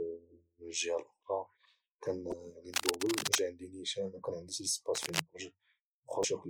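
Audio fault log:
2.29–2.34 s and 6.21–6.25 s: damaged data in a compressed stream. Two brief blips, about 48 ms and 40 ms long, break into the speech. Corrupted bytes in the encoded stream make the decoder misread those frames and lose sync until it finds the next valid frame header, so the output briefly breaks up.
2.74–3.40 s and 4.95–5.22 s: cable scratch noise. Dense, irregular scratching and rustling sits over the speech for about 0.67 s and then about 0.27 s, at roughly the same level as the speech. The likely cause is a worn cable, connector or control being disturbed, with its contact resistance fluctuating rapidly and injecting uneven noise bursts into the signal.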